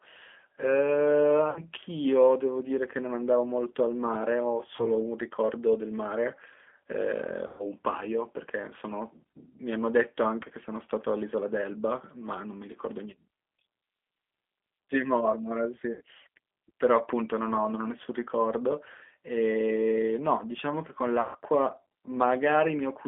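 A speech recording passed through the G.729 codec across its whole length, with the line band running from 250 Hz to 3.5 kHz, so nothing bright remains above that. The 8 kbit/s coding damage is plainly audible as a rough, slightly synthetic texture, because the voice is rebuilt from a filter, a pitch predictor and a few pulses rather than from the original waveform. This sets it apart from a plain band-limited telephone line, which would sound muffled but clean.

VoIP packet loss concealed by the speech codec occurs five times: at 1.50 to 1.61 s after about 60 ms of lost audio, 4.77 to 4.89 s after 20 ms, 7.47 to 7.66 s after 120 ms, 15.95 to 16.01 s after 60 ms, and 21.21 to 21.37 s after 140 ms. These losses fit runs of one to seven 20 ms packets. At each point the decoder carries its last pitch and filter forward and lowers the gain, so the sound stretches into a fading buzzy tone or coloured noise. 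Every disturbance outlasts the gap itself, which shows the decoder recovering frame by frame. A hard dropout would instead leave silence or a click and snap straight back.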